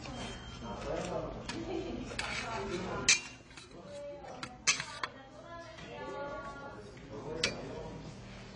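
AAC compression runs throughout, with nothing above 10 kHz and plainly audible smearing and fizzy, warbling texture on sustained sound. The likely cause is AAC-LC coding at a low bitrate, around 24 kbps, where the encoder drops the top band and starves the remaining spectrum of bits.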